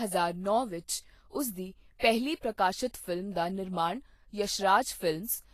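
Throughout, hissy, grainy treble and blurred attacks point to likely Vorbis compression at a low bitrate, around 33 kbps, quantising fine detail into noise.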